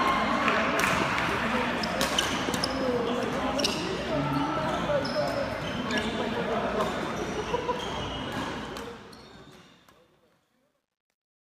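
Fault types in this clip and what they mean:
Truncation distortion on a fade: the fade-out turns gritty from 8.49 s and is worst from 9.58 s, which fits an undithered 12-bit gain stage.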